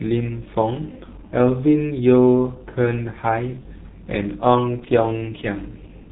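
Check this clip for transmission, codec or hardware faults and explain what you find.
One codec fault runs through the whole speech clip: G.723.1 codec compression, with heavy damage. The coder analyses the signal in 30 ms frames and refreshes its voice model only slowly, so consonants smear into their neighbours and the tone turns muffled and hoarse. The sound points to a rate near 6.3 kbit/s. A spectrogram shows a hard ceiling at 3.8 kHz with nothing above it, and the fricatives look blurred into soft, indistinct patches.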